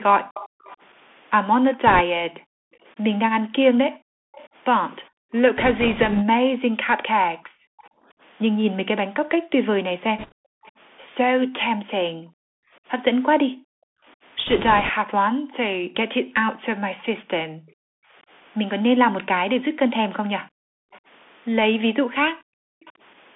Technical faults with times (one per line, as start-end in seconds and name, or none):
0.00-23.35 Bluetooth CVSD headset codec
0.23-22.94 background gated by the echo canceller
0.34-0.77 echo leak
1.87-2.01 bit errors on a Bluetooth voice link
4.34-4.48 echo leak
5.58-6.23 bit errors on a Bluetooth voice link
7.78-10.71 echo leak
10.18-10.32 bit errors on a Bluetooth voice link
14.47-14.90 bit errors on a Bluetooth voice link
16.99-17.04 echo leak
20.92-22.92 echo leak